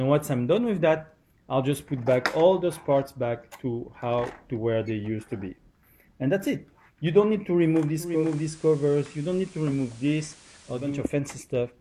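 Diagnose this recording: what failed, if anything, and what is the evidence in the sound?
Digital radio blending to analogue FM at the receiver, 7.93–11.11 s: 0.45 s cross-fades, about 2 dB quieter, hiss about 25 dB below the signal.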